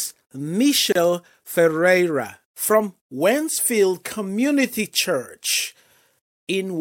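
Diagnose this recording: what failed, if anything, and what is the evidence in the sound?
The failure is at the codec stage: a gap at a join of encoded pieces. The speech drops out from 0.92 to 0.95 s, a gap of about 31 ms with smeared edges, and then resumes exactly where it stopped. Each piece was encoded separately and the pieces were joined without trimming. The encoder's start-up delay and the padding in the last frame of the earlier piece were both kept, leaving that short hole in continuous sound.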